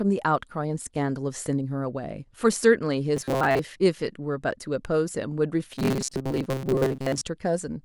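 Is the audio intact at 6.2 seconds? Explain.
No, robotic sound from repeated short buffers runs from 5.73 to 7.21 s: a rigid 134 Hz metallic buzz, likely from looping a roughly 7.5 ms buffer over most of the audio, unlike audible stutter or silent dropouts.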